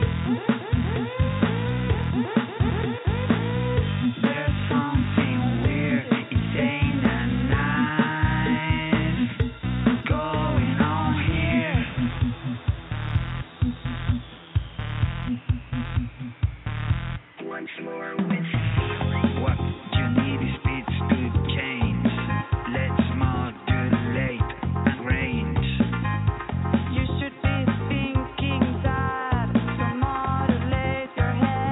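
No technical faults can be heard anywhere in this audio. The sound continues steadily, with nothing interrupting or disturbing it at any point.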